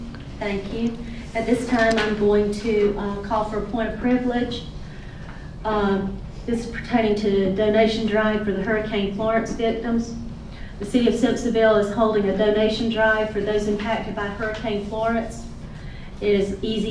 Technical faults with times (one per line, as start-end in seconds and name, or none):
none